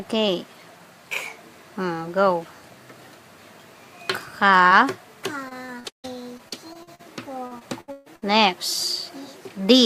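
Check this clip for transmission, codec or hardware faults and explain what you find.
The clip has two kinds of network fault. Both come from lost packets.

At 4.67 to 4.73 s there is a short concealed packet loss. About 40 ms of audio arrived too late or not at all. The decoder covered 33 ms of it by extending the preceding sound, pitched or noise-like to match. It then faded back into the real signal. You hear a brief smear or wobble. A very short sound there may simply disappear.

Repeated packet loss, with the robotic sound it produces, starts at 5.49 s and runs to 7.01 s. That stretch has nine gaps, the longest 157 ms. About a quarter of it is concealment. A second burst runs from 7.47 to 8.24 s. It has five gaps, the longest 141 ms, and 43% of it is filled in. Each gap is patched by continuing the last sound. Then another loss follows. The audio turns choppy, with pieces missing, and a larger share of the second burst is concealed.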